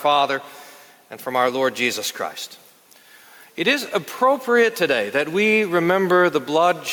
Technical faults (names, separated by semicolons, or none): gain pumping